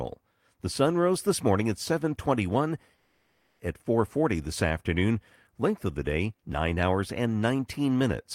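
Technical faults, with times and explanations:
2.95 to 3.62 s, long network dropout: for about 0.64 s the speech stops and a smeared continuation of the last sound takes its place, a buzzy hiss that fades without falling fully silent. When the speech resumes, that stretch is gone. The likely cause is a run of audio that never arrived, which the receiver papered over. On a spectrogram, harmonics flatten into blurred horizontal bands, and the waveform shows a decaying envelope before the speech returns.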